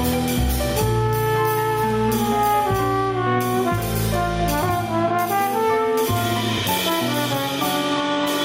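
Gain pumping runs the whole way through: the gain ducks about 10 dB under loud moments, likely from input gain set too high feeding a fast limiter.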